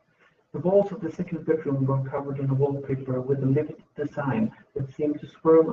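Speech clip: from 1.13 to 1.43 s, between "walls of the" and "bedroom were covered in", the sound turns briefly rougher and noisier without any gap, a lost packet rebuilt from error correction, each fitting several lost packets replayed from low-bitrate copies.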